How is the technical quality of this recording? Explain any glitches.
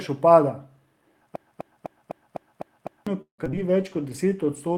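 The recording has four distinct faults, from about a third of the way in to the end: a repeating loop, a burst of choppy concealment, a drop in coding quality, and a stretch of slowed playback.

From 1.36 to 3.07 s there is a broken-record loop. A fragment of about 252 ms plays seven times back to back, identical each pass, and the speech that belonged in that interval never arrives. The likely cause is a stall in the player or stream, which kept re-sending the last chunk it held instead of new audio until the flow resumed.

Between 3.21 and 3.59 s comes repeated packet loss, heard as robotic sound. Four gaps fall in quick succession, the longest about 170 ms. Each hole is patched by extending the preceding sound, so roughly half of this span is synthetic fill. Some material is simply missing. The result is choppy, with the continuity of the speech broken into stuttering pieces.

From 3.58 s to the end of the clip there is a call bitrate drop. 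The speech turns rough and duller, with less high-frequency detail and a coarser, watery texture. That sound fits the encoder being pushed from around 40 kbps down to about 17 kbps after the call's bandwidth estimate fell. It never recovers within the clip, so the degraded quality persists to the final sample.

Overlapping that, from 4.01 to 4.75 s, is a jitter buffer slow-down. The receiver stretched the audio by about 72 ms, playing this section at roughly 91% speed while keeping the pitch unchanged. It did this by repeating single pitch periods or bits of pauses many times over to rebuild its reserve. The speech sounds drawn out and slightly sluggish.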